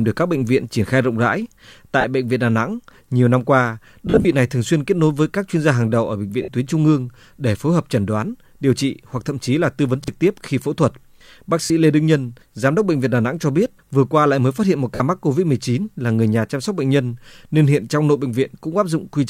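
At 2.01 to 2.04 s, between "triển khai rộng rãi" and "bệnh viện", comes the first of the lost LE Audio frames: a 30 ms gap, which fits three 10 ms LC3 frames, that the decoder fills by replaying the last spectrum with scrambled phase. Voiced harmonics turn into a brief hiss-like smear. On a spectrogram the harmonic lines give way to a diffuse block of similar spectral shape, and the waveform loses its periodic structure.

The same fault returns at 4.07 to 4.26 s, where 120 ms of audio is lost in separate pieces over about 180 ms, the longest run around 40 ms. It sounds like a rough, flickering blur, with patchy smeared columns on the spectrogram.

At 6.42 to 6.48 s a 60 ms loss gives a longer smear whose level visibly sags in the waveform envelope as the concealment fades.

At 10.04 to 10.08 s, between "chí là tư vấn" and "tiếp khi phẫu thuật", a repeated buffer occurs. Fresh audio was late, so the last 40 ms block, which fits a 40 ms buffer, plays once more, and about 40 ms of real speech never appears. 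It sounds like a quick stutter with a hard join. The waveform shows an identical 40 ms segment twice in a row with a discontinuity at the seam, and the spectrogram repeats that slice exactly.

Lost frames recur at 11.64 to 11.70 s (60 ms) and at 14.95 to 15.00 s (50 ms), the last just after "mới phát hiện một". Each is again a noisy smear that fades slightly, with blurred spectral texture where the harmonics should be.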